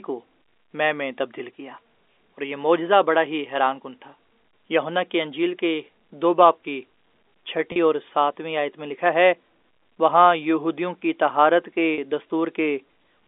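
At 7.72 s and again at 11.94 s there's a brief packet loss with pitch repetition. About 40 ms drops out each time, which fits two 20 ms packets, and the receiver covers it by replaying the last pitch period, so the speech briefly hangs on a slightly buzzy, held tone over the narrow telephone band.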